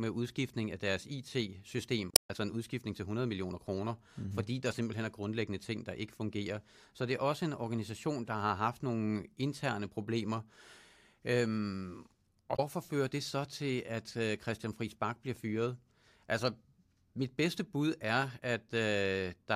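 A short disturbance breaks the speech from 2.10 to 2.30 s, just before "en udskiftning til", and a briefer one from 12.53 to 12.59 s precedes "fører det så til". Both are damaged data in a compressed stream: the decoder misreads corrupted frames, loses sync, and jumps ahead to the next header.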